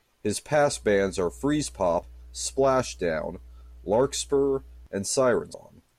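Mains hum enters at 0.72 s and continues until 4.87 s: a steady 60 Hz tone sitting under the speech at roughly 20 dB below it. Power-line current has found its way into the signal path, most likely through a ground loop or a nearby transformer. The result is a constant low drone with some low harmonics above it.

Damaged data in the compressed stream produces a short blip at 2.03 s, while the hum is still present, and another at 5.52 s. At each of these points the encoded bytes were corrupted, so the decoder misread the affected frames and lost sync. It then had to search for the next valid frame header. Each event is a brief glitch.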